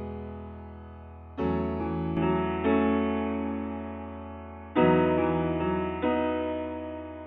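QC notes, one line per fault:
2.17 s to the end: input switched to a poorer device. With no gap at the switch, the sound abruptly turns dull and boxy, nothing above 3.7 kHz, with a modest step in level and a faint new noise floor well below the signal. The likely cause is a change of input to a narrower-band microphone or headset call profile. The spectrogram shows the upper bands cut off sharply at 2.17 s, and the waveform's envelope steps at the same instant.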